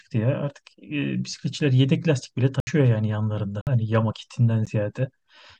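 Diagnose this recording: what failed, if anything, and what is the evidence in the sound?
Blocks of digital silence point to the driver or buffer stage: the speech drops to silence at 2.60–2.67 s (70 ms), 3.61–3.67 s (56 ms) and as a tick at 4.66 s. Unlike network loss concealment, nothing is smoothed or filled in.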